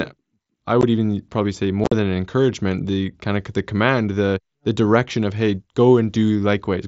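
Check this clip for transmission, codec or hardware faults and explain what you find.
The speech has unconcealed Bluetooth headset packet loss, heard over the light graininess of the wideband mSBC link. At 0.81 s, before "even probably say", about 15 ms drops out. From 1.84 to 1.92 s, before "than an encouragement the", 60 ms vanishes in chopped gaps, the longest 45 ms. Missing headset packets were filled with silence or an idle pattern, not patched over, so the voice cuts out with hard edges. A waveform shows flat gaps, and a spectrogram shows blank vertical stripes.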